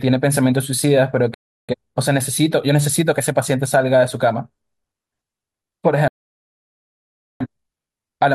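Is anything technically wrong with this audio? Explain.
Yes. Digital broadcast dropouts at 1.34–1.75 s and 6.08–7.46 s: the receiver lost valid frames and muted with a 3 ms fade, leaving silent holes in the speech where that audio is lost.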